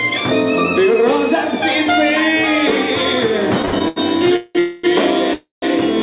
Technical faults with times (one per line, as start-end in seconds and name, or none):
3.62-3.98 repeated stalls (stutter)
4.36-4.85 call audio freeze
5.33-5.64 call audio freeze